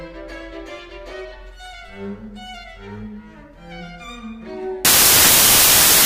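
From 4.85 s to the end, the audio turns into loud, harsh broadband noise: samples built from the wrong bytes. The reader misassembles each sample's bytes, so the rapidly varying low-order bits land in the most significant positions, burying the original signal under broadband hiss.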